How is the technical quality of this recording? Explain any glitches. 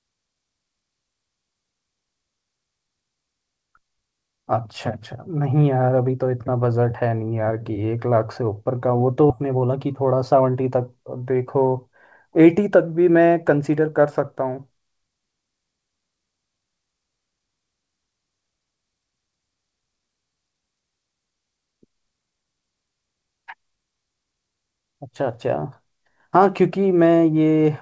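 The recording has two related glitches just after 9 s, and the audio stops at 8 kHz throughout, which fits a wideband call codec such as G.722.

At 9.30 s there is a skip ahead. Roughly 0.7 s of speech is missing. Nothing fills the gap. The two sides are butted together almost directly. Audio was dropped on the way or discarded by an overflowing jitter buffer while newer audio waited. You hear an abrupt jump forward, with part of the speech simply gone.

From 9.42 to 10.57 s comes a jitter buffer speed-up. The buffer still held more audio than its target. So the receiver cut out small pitch-period slices, again and again. About a tenth of a second was removed in total. The speech runs at 109% speed. The pitch stays the same. This short stretch sounds slightly hurried as the delay settles back down.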